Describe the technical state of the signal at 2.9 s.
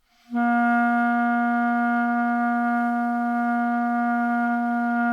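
At 2.9 s the signal is intact, with no dropout, clipping, glitch or other technical fault audible at that moment.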